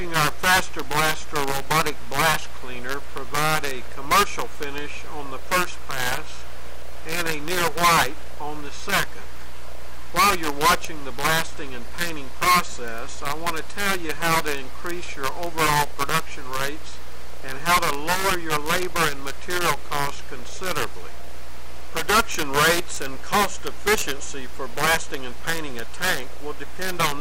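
Right from the start and all the way through, there's a buzzy distortion riding on the sound, and even the quiet gaps fill with noise. That points to a stuck bit, likely one data line held at 0 or 1. Each affected sample jumps by a fixed step of around -15 dBFS, which means a fairly high bit. So the error follows the waveform's shape, and it flips with the sign of small values in the pauses.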